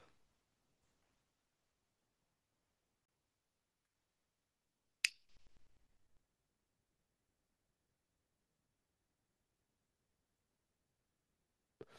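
At 3.05 s the speech drops to silence for about 30 ms, cutting off sharply and coming back by 3.08 s. That's likely a Bluetooth stall: radio interference delayed packets, the headphones' buffer emptied, and playback paused until the retransmitted audio arrived.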